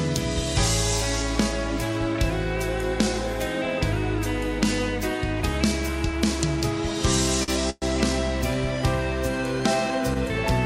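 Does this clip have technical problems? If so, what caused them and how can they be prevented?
Yes, three of them. From 5.37 s right to the end there's timecode bleed: a chirpy warble sitting about 25 dB under the sound, flipping between tones near 1 and 2 kHz. That's linear timecode, and its rhythm fits 24 frames per second, leaking in from a neighbouring track or a cable run alongside the audio. Keep timecode on its own well-separated track, use shielded cable, and route it away from audio lines.

At 7.43 to 7.50 s there's a short stall from a late packet. The sound hangs on for about 45 ms, then picks up exactly where it left off, so nothing is lost but that moment is stretched. A packet showed up after its slot, the jitter buffer emptied, and the receiver held the last bit of sound while it waited. A somewhat deeper jitter buffer or a steadier network path would cover a delay like this.

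Then at 7.70 to 7.84 s comes a call audio freeze. The sound is drawn out and fades for about 120 ms, drops to roughly 10 ms of silence, and then carries on from the same point with nothing missing. A longer hold-up of packets in transit likely emptied the buffer, so the receiver had to invent audio until the data arrived. Prioritising call traffic with QoS and using an adaptive jitter buffer would help prevent it.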